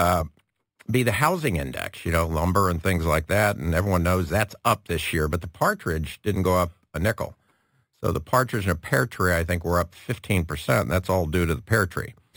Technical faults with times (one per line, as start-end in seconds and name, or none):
0.00-12.37 imaging from sample-and-hold upsampling